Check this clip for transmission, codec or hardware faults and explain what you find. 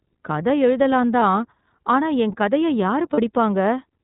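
Two faults are present: narrowband iLBC coding throughout, and two short dropouts concealed by the decoder.

iLBC codec: the whole clip stops at 4 kHz and sounds slightly rough and synthetic, consistent with the 15.2 kbps mode coding each frame's excitation independently.

Lost iLBC frames: at 1.20 to 1.22 s, after "கதை எழுதலாம்", and 3.14 to 3.20 s, after "ஆனா என் கதையை", the decoder repeats the last pitch cycle with added noise. This gives a brief buzzy held vowel lasting about 20 ms and 40 ms, which fits one and two lost 20 ms frames. Clarity returns immediately.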